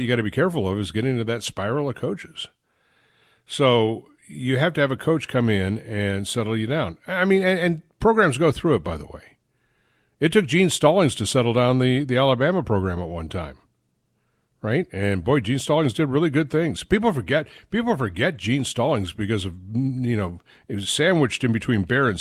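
No technical fault can be heard anywhere in the speech recording; the signal stays continuous and steady throughout.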